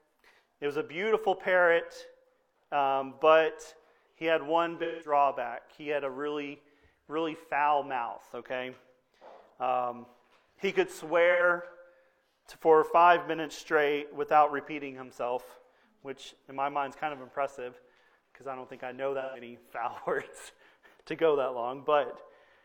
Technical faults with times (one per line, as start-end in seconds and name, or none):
4.83-5.11 AAC frame loss with concealment
11.31-11.43 AAC frame loss with concealment
19.21-19.41 AAC frame loss with concealment